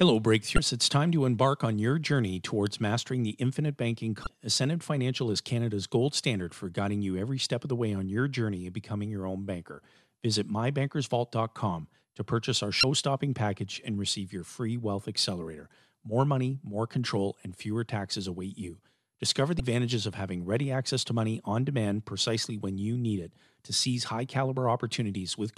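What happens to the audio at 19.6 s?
A brief glitch cuts into the speech from 19.57 to 19.60 s, just before "of having ready access". This is damaged data in the compressed stream: corrupted bytes make the decoder misread those frames, lose sync, and hunt for the next valid frame header.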